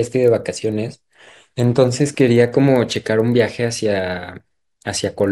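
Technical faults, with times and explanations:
Throughout, resampler restarted on every block: each 40 ms block was converted on its own, which fits 24 kHz audio taken to 48 kHz. Each edge carries a small error, heard as a 25 Hz buzz riding the speech. Spectrograms show faint vertical lines every 40 ms; waveforms show small glitches at the boundaries.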